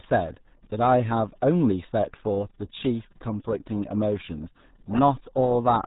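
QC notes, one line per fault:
Throughout: RealAudio 14.4 codec. The speech is band-limited, with nothing above 3.8 kHz. Consonants lose their edge and the sound turns muffled. Damage is heavy. A gargly, bubbling texture sits on the speech. This is an old dial-up speech codec squeezing the signal into very few bits, which fits an 8 kbit/s rate. It keeps only a coarse model of the voice, so detail is discarded and rebuilt roughly.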